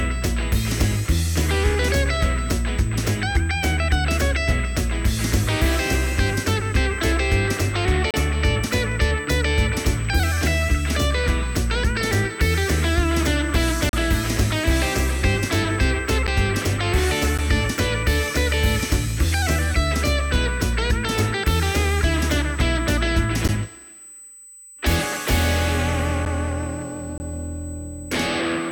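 A steady USB whine sits under the whole recording. It is a fixed tone at 8 kHz, roughly 25 dB below the signal. That pitch matches the bus's 125-microsecond microframes, whose current draw is leaking in through power or ground.

There are also seven blocks of digital silence. The sound cuts out and returns with no fade. The longer holes run from 8.11 to 8.14 s (32 ms), 13.89 to 13.93 s (38 ms) and 27.18 to 27.20 s (21 ms). Short ticks of about 11 ms fall at 16.27, 17.38, 23.48 and 26.25 s. Those lengths fit a 512-sample buffer left unfilled in time.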